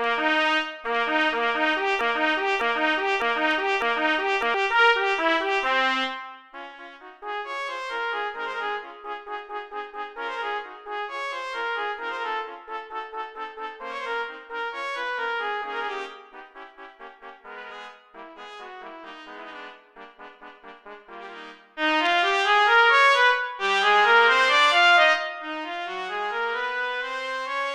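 A broken-record loop runs from 2.01 s to 4.54 s: a 0.60 s fragment of the audio plays four times back to back, each pass identical, before normal playback resumes. The likely cause is a stall in the player, encoder or stream that kept resending the last fragment it held instead of moving on. Whatever should have been heard during those two and a half seconds is gone, replaced entirely by the repeats.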